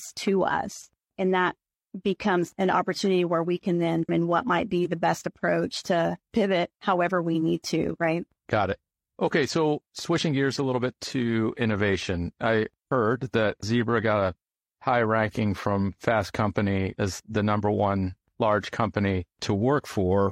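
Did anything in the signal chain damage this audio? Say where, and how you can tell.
Yes: a stream segment skipped at 4.04–4.09 s, where "where we can then" jumps abruptly to "what might be the" with a blip, likely a segment failing to load during network streaming.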